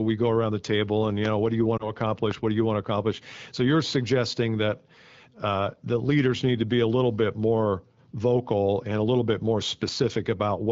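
Speech coming through an AMR wideband (HD Voice) link, with light codec colouring that fits the 12.65 kbit/s mode. From 1.77 to 1.91 s there's a short warble and dip where it sounds like a single lost AMR speech frame: the decoder patched the gap by repeating the last good settings at falling gain. Then at 2.31 to 2.34 s a loud pop, roughly 10 dB above the speech, lands on top while the speech carries on underneath, likely a voltage spike from static, a switch or a plug.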